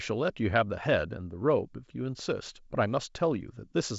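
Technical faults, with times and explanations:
No faults to report here; the speech just carries the usual sound of G.722 wideband telephone coding, consistent with the 64 kbit/s mode, with nothing above 7.7 kHz.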